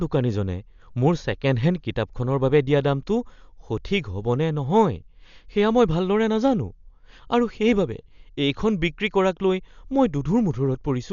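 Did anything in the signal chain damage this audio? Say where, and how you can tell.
Yes, at the codec stage, and it runs through the whole clip. The speech is dull, with nothing above about 6.9 kHz, and a rough, fluttering noise hangs around the voiced sounds. That points to heavy damage, likely from Dolby Digital compression at a low rate, which fits a bitrate around 48 kbps. Starved for bits, the encoder narrows the band and leaves many frequency lines without detail, and the decoder fills those gaps with noise.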